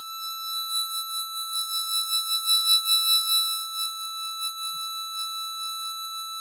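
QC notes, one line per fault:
Throughout: noise suppressor applied to music or sounds. A speech-tuned suppressor treats sustained tones and decay as noise. Attacks pass, but held sounds and tails dip by roughly 5 dB. The level keeps pumping and the music thins between onsets.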